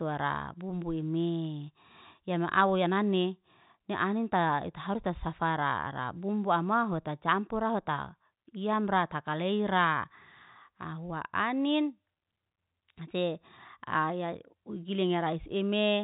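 No technical faults can be heard in this speech.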